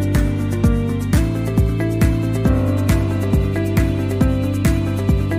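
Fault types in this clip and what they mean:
Section at the wrong speed: from about 1.18 s to the end, the sound abruptly turns quicker and brighter, running about 1.12 times its original rate, with pitch lifted by roughly two semitones so everything seems slightly hurried and raised. Because tempo and pitch shift together at that instant, the cause is likely a playback or editing step that read this stretch against the wrong clock, speeding up the whole passage.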